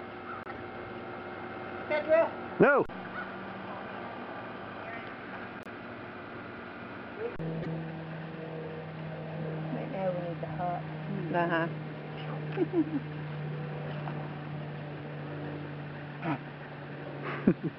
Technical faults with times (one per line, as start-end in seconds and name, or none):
0.43-0.57 corrupt frame decoded
5.53-5.67 corrupt frame decoded
7.62-7.68 corrupt frame decoded